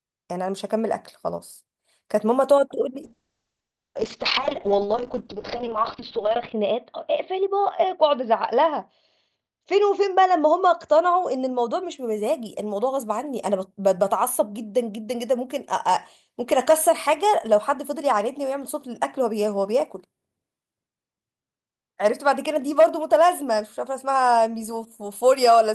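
Call bitrate drop, 3.03 to 12.04 s: the encoder falls from 40 to 9 kbps, cutting bandwidth to 6 kHz. Speech turns coarse and muffled.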